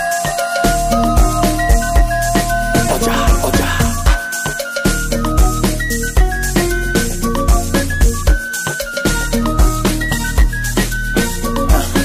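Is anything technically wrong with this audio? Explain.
Yes. From 9.36 s to the end, the adaptive stream switches to a lower bitrate. The treble abruptly thins, with nothing above 14.9 kHz, which fits a drop from 96 kbit/s AAC-LC to 20 kbit/s HE-AAC. A spectrogram shows a sudden hard ceiling; the waveform continues without a gap.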